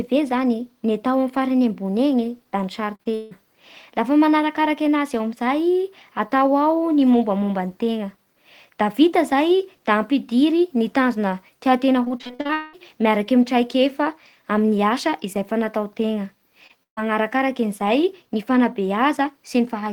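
At 2.95 to 3.33 s, right after "da ny", the stream suffers repeated packet loss, giving a robotic sound: four gaps, the longest 159 ms, mean the receiver is inventing roughly three fifths of this stretch by extending the last sound it had. The patches keep colliding with the next hole, so the audio turns choppy and mechanical, with pieces dropped out. The same fault returns more heavily at 12.05 to 12.75 s, just before "miaraky amin'ny traikefa". Ten gaps, the longest 200 ms, again leave about 60 percent of the span concealed, and the result is a longer run of choppy fragments.

At 16.67 to 16.71 s there is a short concealed packet loss. About 20 ms of data arrived too late to decode, so the receiver bridged the hole by carrying the previous sound forward, then blended back into the real signal. It is heard as a brief smear or wobble.

Immediately afterward, at 16.83 to 16.99 s, a burst of packet loss removes about 140 ms in one go. 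The receiver first continued the last sound and then faded it down, and for about 120 ms of the gap the fade reaches silence. The audio then resumes further along, with the material in between gone.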